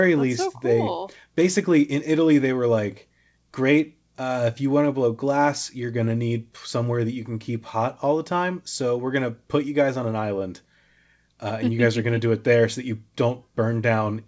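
No technical faults are audible.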